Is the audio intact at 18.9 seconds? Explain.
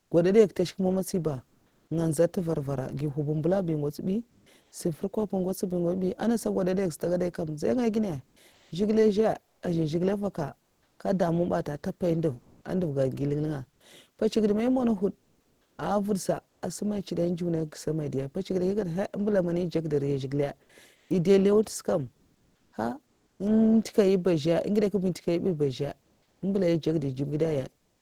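Yes, the speech at 18.9 seconds plays through intact, with no dropout, click, distortion or other fault at that moment.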